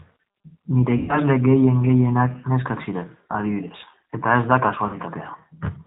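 Speech coded with the G.729 codec at 8 kbit/s throughout: nothing above 4 kHz survives, and the plainly audible rough, slightly synthetic grain of the rebuilt voice separates it from a simple telephone band-limit, which would sound muffled but clean. VoIP packet loss concealed by the speech codec appears at 0.97–1.20 s, about 120 ms lost, which fits four 30 ms packets, and at 4.87–4.98 s, about 60 ms lost. Instead of silent gaps, the decoder stretches the last sound into a buzzy tone or coloured noise that fades, and the voice recovers only gradually afterwards.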